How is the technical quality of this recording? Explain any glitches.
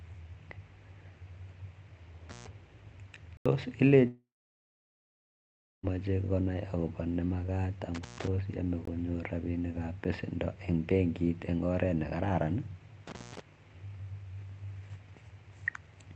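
The recording has three kinds of fault: repeated brief cut-outs with crackle, several hard digital gaps, and one long stretch where the speech disappears. It passes through an Opus call path, whose band limit at about 8 kHz removes the top end.

Intermittent contact occurs at 2.30 to 2.47 s, at 7.95 to 8.27 s just after "konai akopa ne makat", and at 13.07 to 13.41 s just after "eng oret nee kararan". In each case a loose connection opens for roughly 140 ms, 135 ms and 180 ms. The speech drops out with crackle at the edges where the contact scrapes open and closed, and only faint hiss remains while the line is broken.

Blocks of digital silence occur at 3.37 to 3.46 s, at 8.85 to 8.88 s, and at 10.04 s. Here the output buffer was likely not filled in time, so runs of samples were replaced by silence. The first gap lasts 85 ms, which fits a 4096-sample block, and is heard as a short hole. 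The second lasts 21 ms, which fits a 1024-sample block. The third lasts under 7 ms and comes across as a tick. Each one starts and stops abruptly with no fade.

The long network dropout runs from 4.07 to 5.85 s and ends just before "konai akopa ne makat". The likely cause is that no packets arrived for about 1.76 s. The receiver first extends the last sound as a fading buzz or hiss, then leaves roughly 1.6 s of silence. When the speech returns it picks up further along, and everything from that stretch is missing.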